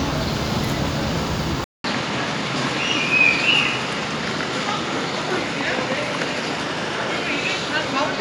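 At 1.64 s there's a 200 ms gap, and from then to the end everything above 11.4 kHz is gone, with a new noise floor well below the sound and level roughly unchanged. That's likely the input switched to a poorer device mid-recording.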